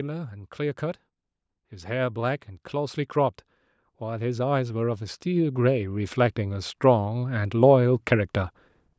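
From 3.98 s to 8.4 s, automatic gain rising lifts the level by about 10 dB. The gain control judged the input too quiet and slowly turned it up, so speech and background swell together over seconds, unlike a sudden step or compressor pumping.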